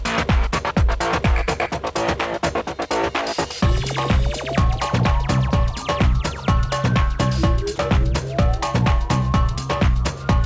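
At 7.76 to 7.78 s there's a tiny gap where the sound gives way to steady comfort noise, likely sound dropped by the voice detector, which briefly judged it background and stopped sending. The call path's band limit is audible too, with nothing above 8 kHz, as fits G.722.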